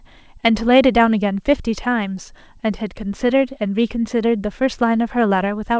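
No technical faults can be heard in this speech recording. It has come through a WebRTC call path with the band limited to 8 kHz, which fits a wideband codec such as G.722, along with that codec's usual coding noise.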